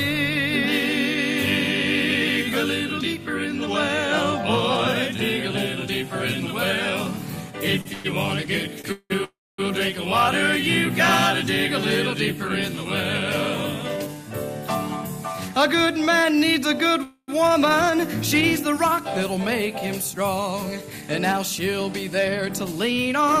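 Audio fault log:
7.81–9.12 s, repeated stalls (stutter): the audio halts five times, the longest hold about 182 ms, 367 ms filled in all. Packets arrived later than playback needed, so the buffer kept emptying. The receiver stretched the last sound each time. Nothing is lost, but it drags.
9.24–9.60 s and 17.03–17.30 s, call audio freeze: playback stops for 343 ms, then 246 ms. The last sound carries on briefly, then fades, to silence for 240 ms in the first and 40 ms in the second. Held-up packets likely emptied the buffer. Playback resumes where it stopped.
19.37–23.35 s, jitter buffer speed-up: the audio runs about 5% fast at unchanged pitch, so it sounds hurried. Too much audio had built up in the buffer. The receiver cut many tiny pitch-period slices, roughly 200 ms in total, to shrink the delay.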